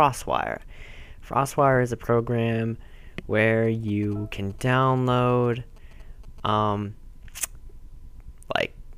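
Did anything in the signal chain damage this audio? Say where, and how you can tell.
Yes. From 3.65 s to 6.49 s a galloping dit-dit-dit pattern of short buzzes sits roughly 25 dB below the main sound. The buzz repeats at about 217 Hz. These are GSM signalling bursts picked up in the analogue wiring. A nearby 2G phone sending short groups of radio bursts induces RF that the input circuitry rectifies, so the burst envelope becomes audible as that buzz.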